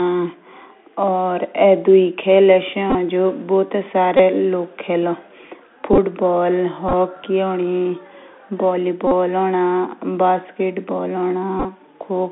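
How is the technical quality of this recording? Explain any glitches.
The recording has clear technical faults: narrowband Bluetooth codec damage throughout, plus six short buzzy glitches.

The Bluetooth CVSD headset codec shapes the whole clip. Sound is confined to roughly 250 Hz to 3.5 kHz. Sibilants turn scratchy, and a granular hiss sits under the speech, consistent with one-bit 64 kHz delta coding whose adaptive step lags loud high content. That hiss and slope distortion set it apart from plain bandlimiting.

The second fault is a Bluetooth headset packet repeated. It strikes at 2.90–2.96 s (just after "दुई खेल एशे"), 4.17–4.21 s, 5.93–5.98 s, 6.89–6.94 s, 9.07–9.12 s and 11.60–11.65 s. Lost packets were refilled by re-decoding the previous packet, and the 3.75 ms repeats produce a brief buzz near 267 Hz. Its steady pitched drone distinguishes it from a dropout's silence.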